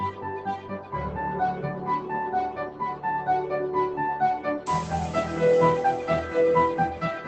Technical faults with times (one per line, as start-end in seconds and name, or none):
0.00-7.27 noise suppressor applied to music or sounds
0.58-0.94 sound cut by the noise suppressor
2.67-3.04 sound cut by the noise suppressor